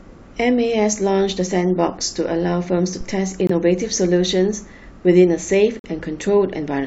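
Speech recording with a phantom power thump at 3.01 to 3.27 s, a deep low-frequency pulse decaying over about 58 ms as a supply step passes through the input coupling capacitors. There are also corrupt-frame mutes at 3.47 to 3.51 s and 5.79 to 5.86 s, abrupt silent gaps where the decoder discarded damaged compressed frames. Their lengths suggest two frames and four frames, and timing is preserved.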